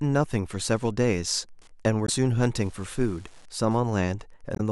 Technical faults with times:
0.00-4.72 Wi-Fi interference
2.05-2.10 damaged data in a compressed stream
4.53-4.60 damaged data in a compressed stream

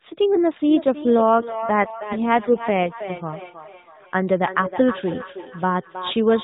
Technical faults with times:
0.69-6.43 feedback echo between two devices
1.34-3.22 AMR rate drop

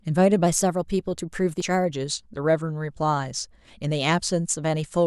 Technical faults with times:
0.46-1.90 drift correction step
1.60 damaged data in a compressed stream

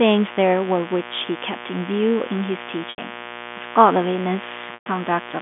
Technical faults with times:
0.00-5.42 mains buzz
2.90-2.98 packet loss with pitch repetition
4.74-4.86 packet loss with pitch repetition

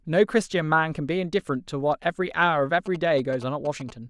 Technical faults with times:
2.86-3.91 GSM signalling bursts

